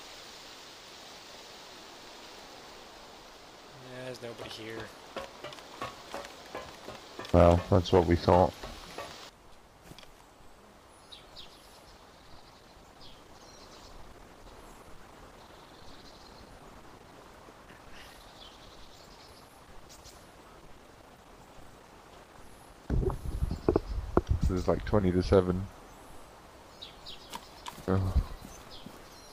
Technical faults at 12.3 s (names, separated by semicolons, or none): adaptive stream at a lower bitrate